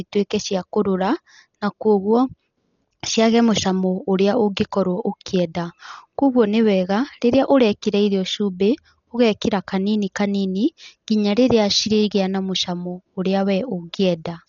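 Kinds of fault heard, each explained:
Dolby Digital compression: speech cut off above 7 kHz, with rough, fluttering noise filling bit-starved frequency lines; heavy damage, likely from AC-3 coding near 40 kbps.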